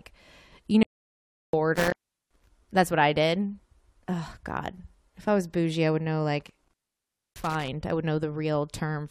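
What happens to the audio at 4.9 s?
Nothing goes wrong at 4.9 s; the speech runs through that moment intact, with no dropout, click, glitch or other fault.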